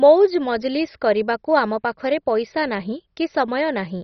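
Throughout the speech, the audio was likely squeezed through MP2 compression at a very low bitrate, too few bits to keep every sub-band alive. Upper bands drop out entirely, leaving nothing above 6.1 kHz, so it sounds dull, while coarsely quantised remaining bands gurgle and flicker granularly.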